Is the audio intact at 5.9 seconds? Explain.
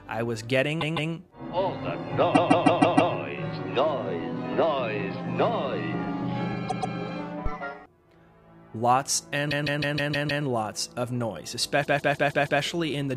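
Yes, the audio is intact at 5.9 seconds, with no dropout, glitch or other fault at that point.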